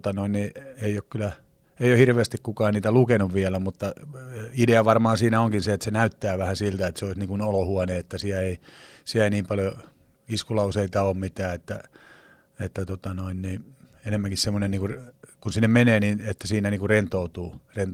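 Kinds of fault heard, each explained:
No faults found in this speech; the Opus voice compression it passes through keeps the full audio band.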